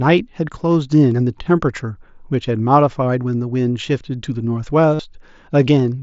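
At 4.95 s, concealed Bluetooth headset packet loss interrupts the speech for about 45 ms, ending at 4.99 s. A short run of consecutive voice packets from the headset failed to arrive, consistent with roughly six lost frames. The receiver filled the gap by repeating the best-matching stretch of the preceding waveform, so the gap sounds like a brief buzzy tone held at full level, with a slight warble as real speech resumes. The mSBC wideband link itself carries the surrounding audio with only light codec grain.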